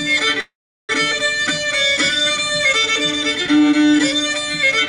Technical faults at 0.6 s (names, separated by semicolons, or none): call audio freeze